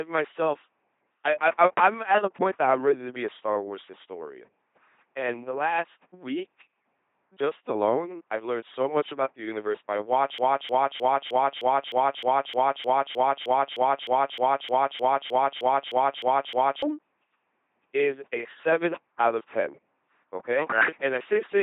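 LPC-10 vocoder damage runs throughout the clip. The speech has been reduced to a short all-pole filter model of the vocal tract, excited either by a buzzy pulse train or by noise, with each moment forced to count as fully voiced or fully unvoiced. The result is a flat, mechanical robot voice with stray buzz and hiss where that choice goes wrong, heavy enough to point to a rate around 2.4 kbit/s, and nothing is left above 3.8 kHz.

A broken-record loop starts at 10.38 s, right after "about the universe by", and lasts until 16.82 s. A 307 ms fragment repeats exactly, back to back, 21 times, so the same snippet stutters for over six seconds. The player or stream has likely stalled and kept replaying the last piece it held, and whatever should have been heard in that stretch is gone.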